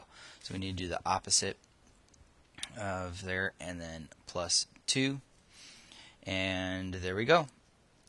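Nothing wrong turns up here, as far as a careful listen goes; the audio runs along without any technical fault worth flagging.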